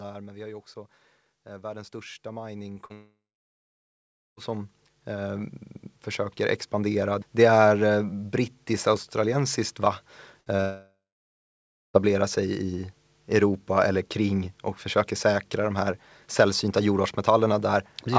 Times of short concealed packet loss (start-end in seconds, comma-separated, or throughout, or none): 2.74-2.92, 10.57-10.60